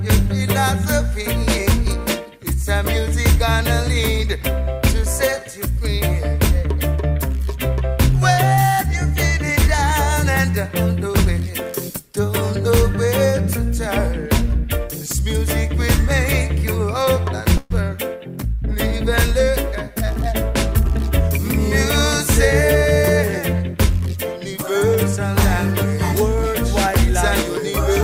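At 17.57 s the audio stalls for about 0.15 s in a call audio freeze. The last sound is stretched into a brief fading buzz of about 128 ms, likely because delayed packets drained the jitter buffer. Unlike a dropout, nothing is skipped: the audio resumes where it stopped, only later. From 20.12 to 21.39 s a jitter buffer speed-up plays the sound about 3% fast at unchanged pitch, trimming roughly 50 ms in tiny repeated cuts to recover that added delay. Unlike a resampling error, it hurries the timing without raising the pitch.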